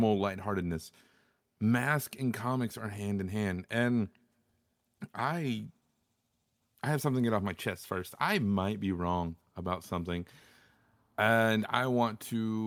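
No technical faults occur at any point in this speech recording, so there is nothing to describe in time order.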